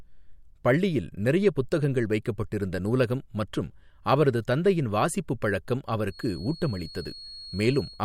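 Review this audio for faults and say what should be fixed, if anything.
From 6.05 s to the end at 8.05 s, just after "அவரது தந்தையின் வாசிப்புப் பழக்கம்", a thin, steady tone at 4.3 kHz sits behind the speech, around 20 dB below it and swelling and fading slowly in level. This is a feedback whistle, likely caused by the loudspeaker-to-microphone loop hovering right at the edge of feedback, so that one frequency sustains without growing. On a spectrogram it appears as a narrow horizontal line at 4.3 kHz. To prevent it, reduce monitor gain or move the microphone away from the loudspeaker, and add a narrow notch near 4.3 kHz if needed.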